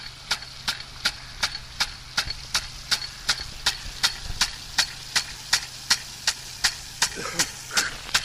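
No technical faults can be heard in this audio; the signal stays steady and intact throughout.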